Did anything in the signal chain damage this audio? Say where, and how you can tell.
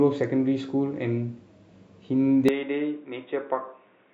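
Yes. From 2.49 s to the end, the speech suddenly goes boxy, nothing above 3.8 kHz, about 5 dB quieter, with faint new background noise roughly 45 dB down and no gap. That's likely an input switched to a poorer device at the driver stage.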